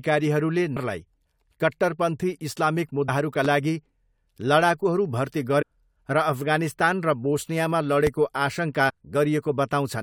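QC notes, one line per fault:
0.76–0.78 s, 3.08 s, 5.61–5.63 s, 8.88–8.90 s: damaged data in a compressed stream. Each is a brief chirp or blip lasting about 20 ms. Corrupt frames make the decoder misread the data, lose sync and hunt for the next valid frame header.
3.45–3.48 s and 8.07–8.10 s: loud pop. Each is a single sharp pop, about 10 dB and about 15 dB above the speech respectively, with the speech continuing underneath. This is likely an electrical transient from a plug, switch or static discharge, shaped by the downstream circuitry.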